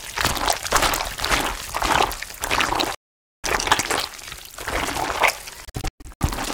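At 2.94 s the sound cuts to silence for about half a second, resuming at 3.44 s as though it had kept playing underneath; a second dropout from 5.65 to 6.21 s breaks into several shorter gaps, the longest about 0.12 s. This is likely a Bluetooth dropout, where late packets are discarded. On a waveform each gap is a flat line with sheer edges; a spectrogram shows full-height blank columns.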